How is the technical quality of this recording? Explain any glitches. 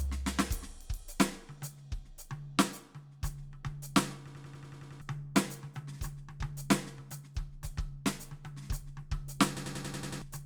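The recording is marred by two system hang loops, at 4.27 to 5.02 s and again at 9.57 to 10.22 s. Each time, playback froze while the sound hardware kept cycling one ring buffer. A 93 ms slice of the music repeats exactly, eight times and then seven, at 10.8 Hz, a length that fits a 4096-sample buffer. This is long enough to be heard as a rapid machine-gun stutter rather than a buzz, and roughly 0.7 s of music is lost at each point.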